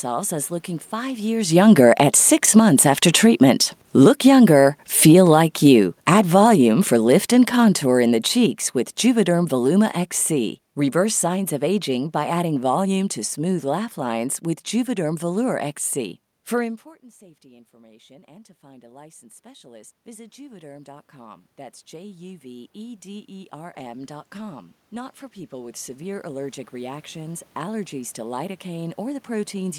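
Right after "as looking five", around 1.34 s, you can hear the automatic gain falling. The control decided the input was too loud, or its background noise too strong, and started pulling its gain down. It keeps sinking until about 14.26 s, roughly 22 dB in all, so the speech and the room noise behind it fade together instead of the level settling. That comes just before a spot near 1.5 s where the talker shifts position at the mic.

Inside that long slide there are two short spells of automatic gain rising, from 2.09 to 3.90 s (about 7 dB) and from 4.44 to 5.77 s (about 4 dB). In both, the voice and background swell up together for a second or two before the overall downward trend takes over again. From 17.42 s to the end, the gain climbs once more. This follows the talker moving again around 16.5 s, which dropped the input by about 24 dB. The control reacts by slowly lifting everything, so the room noise rises right along with the speech.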